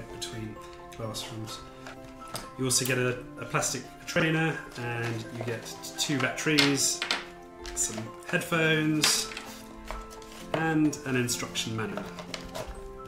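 Chunks out of order occur at 4.16 to 4.22 s, 9.16 to 9.20 s and 11.86 to 11.94 s. Each time, a 20 ms chunk plays two, one and three chunks late respectively, so the sound briefly jumbles. The waveform shows abrupt steps at each join, and the spectrogram shows thin vertical broadband lines there.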